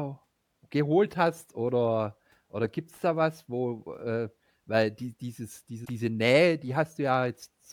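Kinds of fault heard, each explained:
Damaged data in a compressed stream: a short stretch of the coded speech got corrupted, so the decoder misread those frames, lost its place and hunted for the next clean frame header. You hear it as a quick disruption from about 5.81 to 5.90 s.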